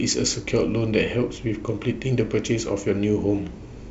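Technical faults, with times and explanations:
No technical faults heard.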